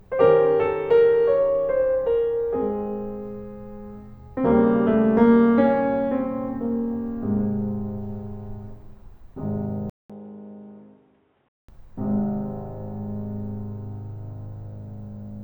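At 9.90 s the music drops out for about 200 ms, then comes back dull and boxy, with nothing above 3.8 kHz, a bit quieter, and a faint new noise floor underneath. That's likely the input switched to a poorer device, holding until 11.69 s.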